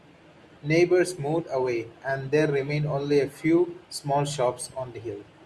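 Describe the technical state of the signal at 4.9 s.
At 4.9 s the signal is intact, with no audible fault at that point in the speech.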